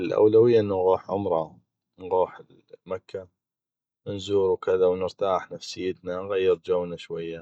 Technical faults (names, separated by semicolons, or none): none